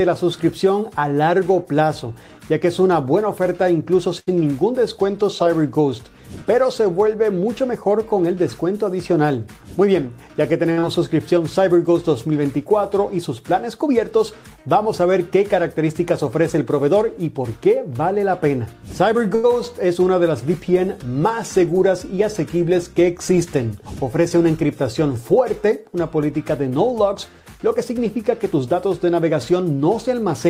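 The audio has two short stalls from a late packet, at 4.19 to 4.29 s and 19.35 to 19.46 s, where the sound is held for 77 ms and 89 ms until the packet arrives, with nothing lost. Three jitter buffer speed-ups follow from the receiver trimming pitch periods to cut built-up delay. At 9.49 to 10.34 s the audio runs 109% fast, dropping about a tenth of a second. At 18.23 to 18.74 s it runs 106%, and at 27.55 to 28.86 s it runs 104%. In the first two the audio sounds hurried at unchanged pitch.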